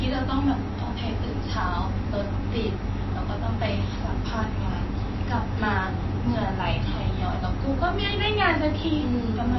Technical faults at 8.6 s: MP3 compression

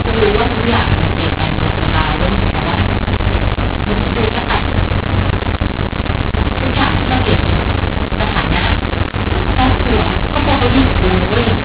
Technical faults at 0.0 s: mu-law and A-law mixed up

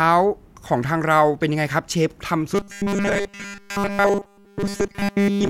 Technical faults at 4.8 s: robotic sound from repeated short buffers

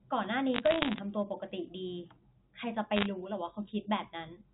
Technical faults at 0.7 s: bit errors on a digital phone line

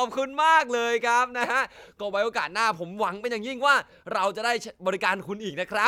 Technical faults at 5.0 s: none

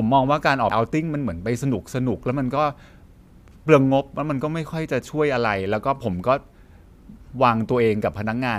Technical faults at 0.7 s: damaged data in a compressed stream

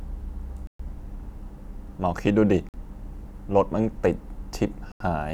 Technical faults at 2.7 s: Bluetooth stall

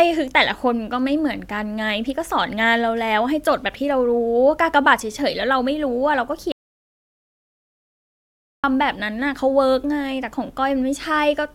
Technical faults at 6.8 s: audio dropout to silence

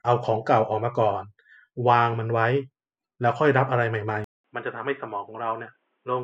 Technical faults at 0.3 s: none

